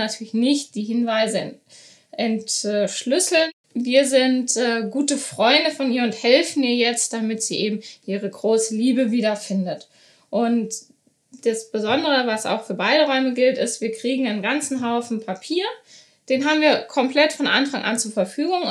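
No technical faults are audible anywhere in the recording.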